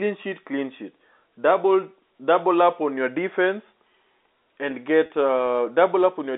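At 5.06 to 5.10 s, packet loss with pitch repetition leaves a 40 ms gap, which fits two 20 ms packets. The receiver bridges it by repeating the last pitch period, so it sounds like a brief held, buzzy tone rather than the silent hole of a plain dropout.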